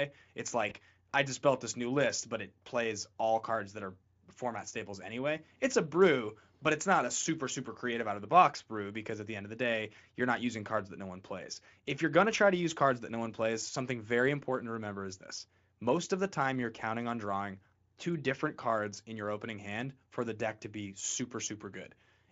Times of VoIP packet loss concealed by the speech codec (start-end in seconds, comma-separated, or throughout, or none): 0.69-0.73